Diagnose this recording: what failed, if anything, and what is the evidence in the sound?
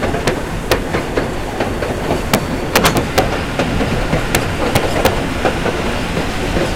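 Integer overflow in a fixed-point gain or format-conversion stage: cracks at 0.28, 0.72, 2.34 and 4.35 s, and from 2.76–3.19 and 4.76–5.07 s, with peaks up to about 5 dB over full scale. Samples wrap rather than clamp, leaving sign-flipped spikes that jump across the range and broadband spectrogram streaks.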